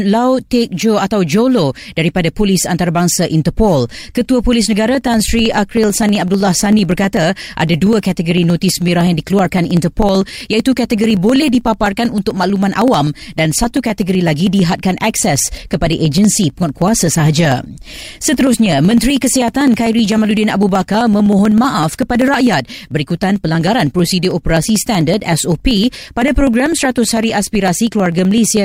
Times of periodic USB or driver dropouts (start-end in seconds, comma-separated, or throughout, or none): 4.88-28.57